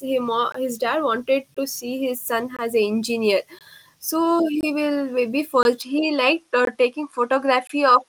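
The speech breaks up with a gap between chunks at 0.52, 1.54, 2.57 (right after "his son"), 3.59, 4.61 (right after "engineer so"), 5.63, 6.65 and 7.67 s. Each hole lasts about 21 ms, and they recur once per second. That spacing suggests audio delivered in 1-second blocks with a short stretch of silence inserted at every join. The timing fits codec padding or late chunk starts in playback. Nothing is cut from the speech, but each join is heard as a brief dropout.

From 5.82 s to the end, the sound changes character without any pause or jump in level. Energy stops at 11.4 kHz, so the top of the spectrum is missing and the speech sounds duller. A faint new noise floor, very roughly 55 dB below the speech, appears at the same point. This is likely an input switched to a poorer device mid-recording. The last two chunk gaps fall inside this duller section.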